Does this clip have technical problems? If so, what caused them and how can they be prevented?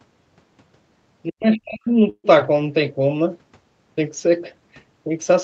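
Yes. From 1.3 to 1.89 s the speech dips, at its deepest by roughly 40 dB, for about half a second in total. This is speech suppressed in double talk, likely caused by the echo canceller failing to separate the near talker from loudspeaker echo while both sides spoke, so it attenuated everything. It can be prevented with headsets or a better double-talk detector in the echo canceller.

From 2.09 to 2.26 s there is a call audio freeze. The last sound is stretched into a fading fill lasting 145 ms, including about 60 ms of silence. The speech then resumes where it stopped with nothing missing, so playback ends 145 ms later than before. This likely comes from delayed packets draining the jitter buffer. It can be prevented with a steadier network path or a larger adaptive jitter buffer.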